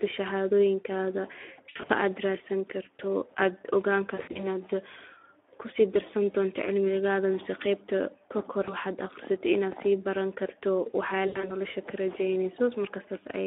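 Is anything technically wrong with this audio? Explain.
Yes, two things. The whole clip runs through the Speex codec at around 11 kbps, squeezed into a phone-style band of roughly 300 Hz to 3.5 kHz. At that rate the codec can't spend many bits describing the excitation behind the speech, so the speech comes out plainly hoarse and grainy, and there's nothing above 3.5 kHz.

There are also four spots of VoIP packet loss concealed by the speech codec, at 1.69–1.92 s, 4.15–4.47 s, 8.63–8.75 s and 11.27–11.57 s. The decoder bridges each gap by repeating its last pitch and filter while fading the level. You hear a brief buzzy or noisy, smeared stretch that dips, then weak, distorted sound while the decoder recovers. In the first, second and fourth spots the drops are scattered, with gaps of up to 60 to 80 ms.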